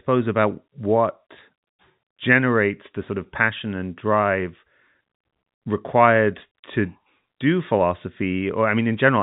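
No technical fault can be heard in the speech: it carries the narrow band of G.711 telephone coding, with nothing above about 3.8 kHz and no more than a faint trace of the format's level-following quantisation noise.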